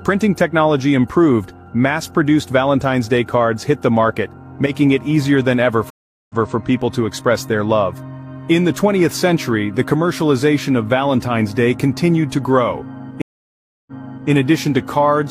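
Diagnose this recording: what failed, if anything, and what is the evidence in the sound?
Network stream reconnects at 5.90 s and 13.22 s. The audio drops out for 0.4 s and 0.65 s, then a fresh decoder resumes 0.23 s and 0.42 s earlier.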